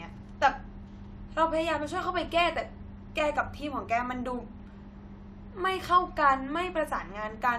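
No technical faults can be heard anywhere in the recording. The speech runs its whole length with nothing audibly going wrong.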